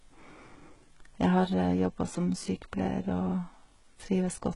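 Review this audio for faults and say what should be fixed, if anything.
HE-AAC compression damage runs through the whole clip. The damage is heavy. The treble sounds synthetic, and nothing is heard above 11.1 kHz. The s sounds come out gritty and lispy, with a metallic edge. The likely cause is HE-AAC coding. It discards the upper band and rebuilds it by copying lower bands upward under a coarse envelope. The rebuilt harmonics do not match the real ones. The harshness points to a very low bitrate, around 12 kbps.

To prevent it, encode speech at a higher bitrate with a codec that keeps the real treble instead of reconstructing it.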